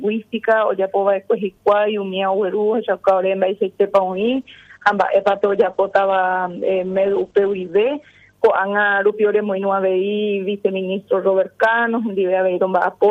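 A call bitrate drop runs from 4.13 to 8.39 s. The audio turns coarse and muffled, with the top end cut from 20 kHz to 8 kHz, which fits the encoder falling from about 48 to 10 kbps.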